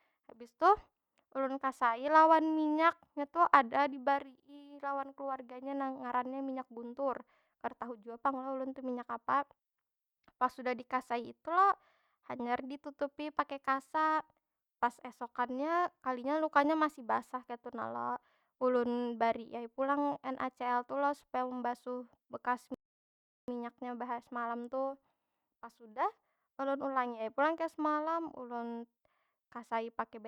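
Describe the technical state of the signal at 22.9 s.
At 22.9 s the speech sits inside a rebuffering stall running from 22.74 to 23.48 s: the player exhausted its downloaded audio and halted, adding 0.74 s of silence. Unlike a dropout, nothing is skipped; the sound resumes exactly where it stopped.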